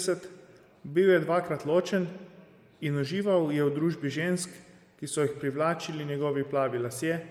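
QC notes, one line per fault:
Throughout, Bluetooth LC3 compression: likely a low-bitrate LE Audio link zeroing upper spectrum and noise-filling it, giving the speech a plainly audible breathy, grainy edge.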